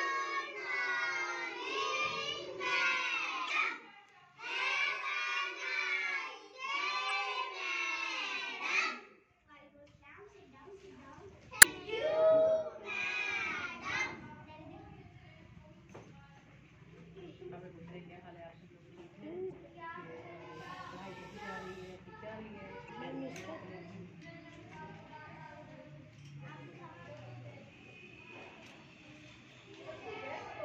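Damaged data in a compressed stream at 3.46–3.51, 7.07–7.11, 11.59–11.65, 19.48–19.53 and 22.85–22.90 s: corrupted frames desync the decoder, producing brief glitches of roughly 40 to 60 ms, heard as a chirp, squawk, click or short hole.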